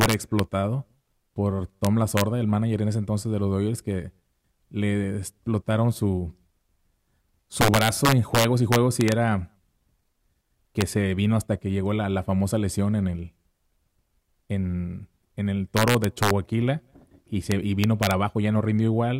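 Integer overflow strikes the speech six times: 0.01–0.39 s, 1.85–2.21 s before "el manager en ese", 7.61–9.12 s, 10.81 s before "se vino hasta que", 15.77–16.31 s after "en en el", and 17.52–18.11 s. Loud peaks pass the integer limit by about 1 to 5 dB. They are not clamped. They wrap to the opposite sign instead. Each sounds like a violent crack, sharper than clipping.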